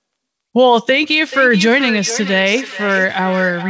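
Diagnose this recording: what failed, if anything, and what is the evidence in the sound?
The failure is in call processing: a feedback echo between two devices in the same room. From 1.32 s to the end of the recording, each stretch of speech returns roughly every 0.4 s, peaking at about 12 dB below the direct speech and sounding thinner and more ringing on each pass. One device replays the other's microphone signal, and that microphone picks it up again. Neither echo canceller removes sound played by the other device. On a spectrogram, each syllable appears as a fainter copy at regular intervals, all cut off at 8 kHz by the G.722 call path.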